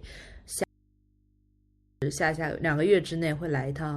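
At 0.64 s the speech cuts off abruptly and doesn't return until 2.02 s, an audio dropout to a faint residue lasting about 1.38 s. The gap holds only mains hum, roughly 40 dB below the speech, most likely from the source disconnecting while the input stayed open. On a waveform the envelope collapses to a thin flat band with vertical edges. A spectrogram shows the speech energy vanishing, leaving only steady horizontal lines at the hum frequency and its harmonics.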